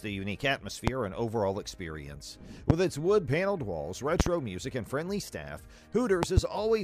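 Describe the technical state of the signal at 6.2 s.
A loud pop, two thumps between 6.23 and 6.40 s, far above the level of the sound, which carries on underneath rather than dropping out. It is likely a voltage step from a plug, switch or static.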